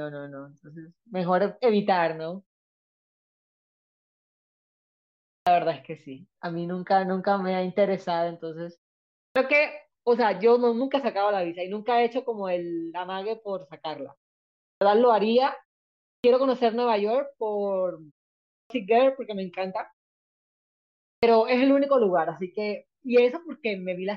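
Six times in this speech clip the first part of a phrase coming out of a pause is swallowed, the fault known as clipped start after a pause. It happens at 5.28, 9.18, 14.65, 16.05, 18.52 and 21.04 s, and each time roughly 160 to 190 ms is lost as the output path wakes or relocks after going idle during the silence before it. The pauses range from about half a second to 2.89 s. In each case speech bursts in abruptly, without its opening sounds.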